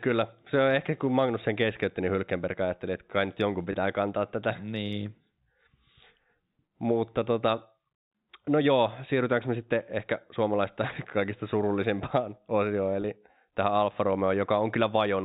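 At 3.72 to 3.74 s and again at 13.02 to 13.04 s there is a brief held, slightly buzzy smear, as if the sound froze on one tone for an instant before carrying on. This is packet loss with pitch repetition: about 20 ms of audio went missing each time, which fits a single lost packet, and the receiver filled the gap by repeating the last pitch period. The concealment is short. The fixed-line G.711 telephone coding keeps everything below 4 kHz.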